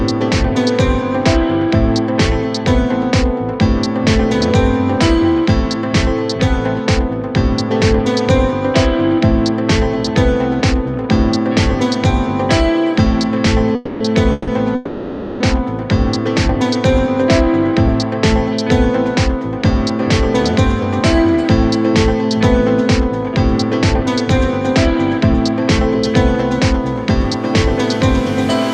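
Packets were likely held up and the jitter buffer ran dry three times, at 13.75–14.02 s, 14.32–14.49 s and 14.75–15.42 s, so the call audio freezes into a fading buzz before resuming where it stopped. From 17.05 s to 27.06 s a jitter buffer speed-up trims short pitch-period slices, removing about 70 ms in total. The sound runs about 1% faster at unchanged pitch.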